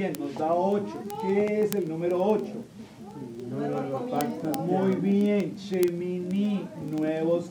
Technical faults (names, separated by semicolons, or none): word clock ticks